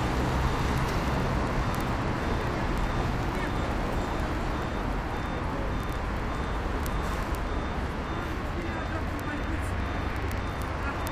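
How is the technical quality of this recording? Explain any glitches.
The recording has one persistent fault running through almost its entire length.

Word clock ticks, from 0.11 s to 11.10 s: the digital link was read by a device clocked independently, off by around 700 parts per million. Each slip misreads samples and drops or repeats one, roughly every 0.03 s, some four hundred times, giving a steady rattling buzz.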